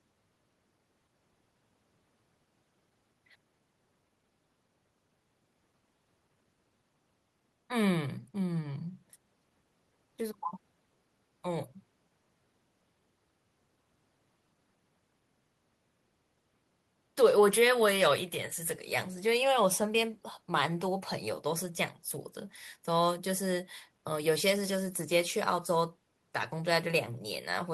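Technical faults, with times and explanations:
3.35–3.37 s, skip ahead: playback jumps forward with no fill, dropping around 0.7 s of speech. That audio was discarded while later packets were already queued, so the two sides of the cut are joined almost directly and the speech sounds abruptly clipped.
3.45–4.31 s, jitter buffer speed-up: the speech runs at about 111% speed with unchanged pitch and sounds briefly hurried. The receiver was holding excess buffered audio and removed short pitch-period pieces in quick succession, trimming roughly a tenth of a second to reduce delay.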